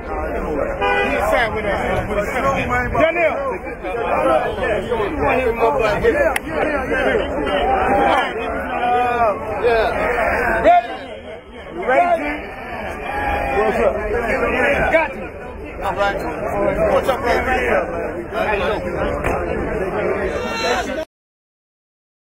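A short glitch breaks through at 6.62 s, and another at 15.12 s, each lasting about 18 milliseconds. Both are damaged data in the compressed stream: a patch of corrupted bytes made the decoder misread the frames there, lose sync, and skip ahead to the next valid frame header, discarding the sliver of audio in between.

At 21.03 s the sound stops dead in the middle of whatever was sounding, with no decay, and the remaining second or so is flat digital silence. This is a cut-off end. The final stretch of audio buffers was never written or played out, so the signal was severed abruptly rather than being allowed to finish or fade.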